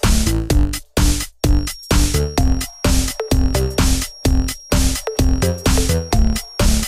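From 1.38 s to the end there's a feedback whistle, a thin steady tone at 5.6 kHz sitting well under the main sound and wobbling slightly in level. Likely cause: the speaker-to-mic loop is hovering right at the edge of feedback without tipping over.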